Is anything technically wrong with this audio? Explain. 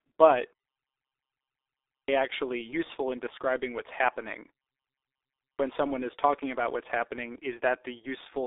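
Yes, there are two kinds of fault. The whole recording has passed through the G.723.1 codec, and twice a clipped start after a pause cuts off the beginning of the speech.

G.723.1 codec damage is heavy and runs from start to end. The codec works in 30 ms frames at a very low rate, and the sound fits a bitrate of about 6 kbit/s. It updates its model of the voice slowly, so the speech sounds muffled and hoarse, with smeared consonants. On a spectrogram, everything stops abruptly at about 3.8 kHz, and the energy below that looks coarse and blocky from frame to frame. Fricatives appear as faint, truncated smudges rather than bright bands.

A clipped start after a pause occurs at 1.77 s, following about 1.3 s of silence. About 0.31 s of speech is lost there, up to 2.08 s. It happens again at 5.26 s, after a 0.8 s pause, where about 0.33 s disappears up to 5.60 s. During the silence the output device sleeps, and it has not fully woken when speech resumes. 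Each time, the speech bursts in abruptly without its first sounds. The waveform shows a flat line that jumps straight into the speech, with no gradual onset.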